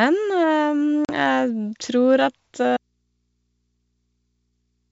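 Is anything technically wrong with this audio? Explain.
Yes. At 1.05 s there is packet loss on an ADPCM call: about 40 ms of packets go missing and are filled with silence. The decoder's predictor and step size lose track of the sender's. The waveform shows a clean-edged flat gap, then speech returning with brief distortion before settling.

From 2.77 s to the end, the speech drops out abruptly to a faint residue of mains hum, about 50 dB below the signal. The likely cause is a lost feed with the input still open. A spectrogram shows speech energy vanishing at once, leaving only thin low-frequency hum lines.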